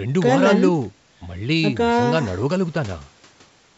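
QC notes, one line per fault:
No faults found; the speech bears the normal marks of call microphone processing, with the lowest bass trimmed and nothing above 8 kHz.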